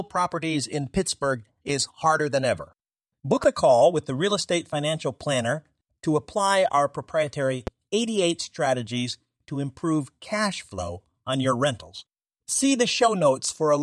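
Loud pops at 3.44 to 3.47 s and 7.67 to 7.70 s cut sharply across this speech clip, the second louder, peaking roughly 10 dB above the signal against about 5 dB for the first. Each is a single brief thump over speech that continues underneath, likely from a voltage spike such as a switch, plug or static discharge entering the chain.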